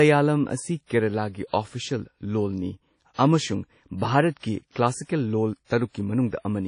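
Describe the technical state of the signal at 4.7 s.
At 4.72 s a short hiss rises out of near-silence and runs for about 38 ms, ending at 4.76 s, just ahead of a sharp speech onset that lands soft and smeared instead of crisp. This is pre-echo. The codec spreads its quantisation error evenly across each transform block. Here the attack falls late in a block, so noise scaled to that loud onset also fills the quiet stretch before it, where nothing masks it.

Around that moment, as across the whole clip, the speech has a ringing, washy quality, with a hiss that swells and fades along with the signal, and nothing survives above 10.1 kHz. That pattern points to WMA compression, likely at a low bitrate around 32 kbps, where long transform blocks smear quantisation noise over tens of milliseconds and weaker spectral detail is discarded outright. The damage is plainly audible, and those long blocks are what give the pre-echo its length.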